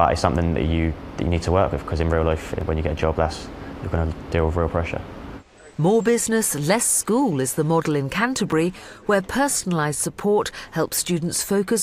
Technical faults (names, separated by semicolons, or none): clock drift buffer slips